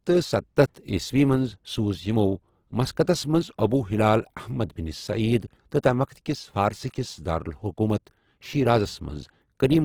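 A speech clip with plainly audible Opus compression throughout, likely from the codec's CELT music mode at a low rate, which fits about 16 kbps. Content still reaches about 20.2 kHz with bands filled rather than emptied, so the speech sounds rough and grainy instead of the swirling holes of MP3.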